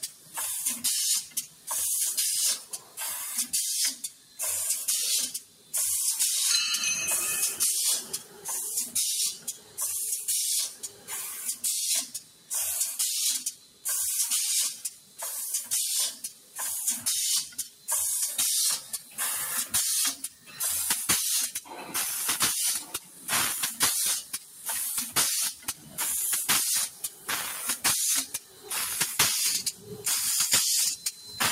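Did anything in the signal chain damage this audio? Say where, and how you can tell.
Yes. In call processing, a speech noise suppressor applied to music or sounds pumps the level by around 10 dB throughout, mistaking sustained tones and tails for noise.

Sound cut by the noise suppressor: from 0.02 to 5.74 s and from 8.19 to 31.28 s, held and decaying parts sink by up to about 8 dB, while attacks mostly survive.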